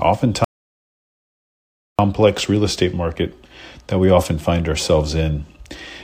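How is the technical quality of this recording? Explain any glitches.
The recording has one clear fault: an audio dropout to silence from 0.44 s to 1.99 s. The input signal was most likely lost, through a disconnected device, a failed link or an accidental mute, while the recorder kept writing silence. For about 1.54 seconds the speech stops abruptly and resumes just as suddenly, and the gap is silent with no room tone beneath it. Whatever was said during that stretch is gone.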